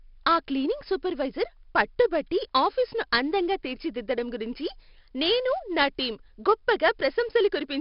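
From start to end the speech carries heavy 4-bit ADPCM compression. Coarse prediction steps leave gritty hiss riding every loud syllable, with harsh attacks, unlike a steady noise floor or warbling MP3 artefacts. Nothing above 5.3 kHz and about 44 kbps fit roughly 11 kHz sampling.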